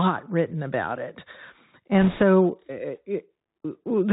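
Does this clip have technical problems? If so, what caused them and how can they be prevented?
Yes. The Bluetooth CVSD headset codec affects the whole clip, and the damage is plainly audible. The codec sends one up-or-down bit per sample with an adaptive step, which fits a 64 kbps link. Nothing above 4 kHz survives. S sounds turn scratchy, and a granular hiss sits under the speech. To prevent this, record over a wideband headset mode or a wired microphone.

From 2.01 to 2.22 s there are bit errors on a Bluetooth voice link. A few percent of the bits were flipped. Each CVSD bit carries only a small step, and the errors fade quickly. So there are no sharp clicks, only a brief rushing, crackly noise over the speech. Keeping the headset close to the receiver and away from radio interference would prevent it.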